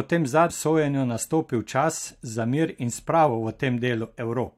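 A short glitch at 0.49 s, just before "sojenju nastopil čas za", and another at 3.28 s, right after "čas za mir in", are damaged data in a compressed stream: corrupted bytes made the decoder misread frames and lose sync until it found the next frame header.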